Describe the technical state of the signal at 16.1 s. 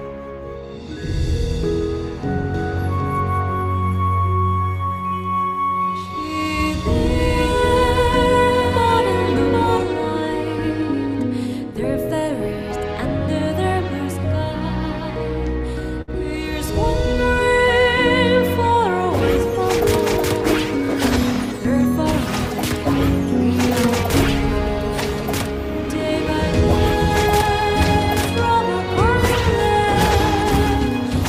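At 16.1 s the sound hangs for a moment: from 16.01 to 16.10 s the last bit of audio is held and smeared out, with a faint buzzy, slightly dipped quality, before continuing exactly where it left off. This is a short stall from a late packet. A packet missed its playout time, the jitter buffer ran dry, and the receiver stretched about 62 ms of existing audio to fill the gap. Nothing is lost, but everything afterward plays about 62 ms later.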